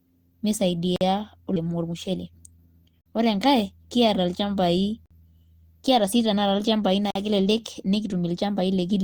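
Speech, with two distinct faults. A gap between chunks appears four times, at 0.96, 3.01, 5.06 and 7.11 s. Each is a silence of about 48 ms, recurring after every 2 s of audio. This points to chunked delivery with padding or late playback at each join. Nothing is lost, but the flow breaks. From 1.66 to 3.88 s a jitter buffer speed-up is audible. The speech plays at 115% rate without a pitch change and sounds hurried. The receiver was draining an overfull buffer by cutting pitch-period-sized slices, removing roughly 0.3 s in total.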